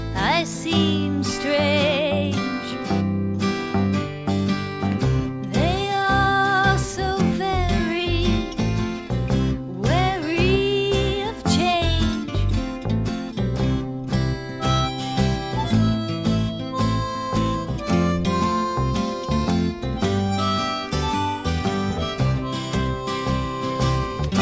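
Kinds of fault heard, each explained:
No technical faults can be heard in this audio. There is nothing here that needs a line of its own.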